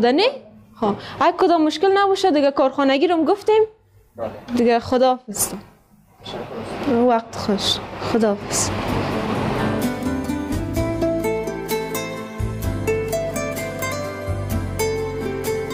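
No technical faults can be heard anywhere in this clip. The sound continues without any audible break or disturbance.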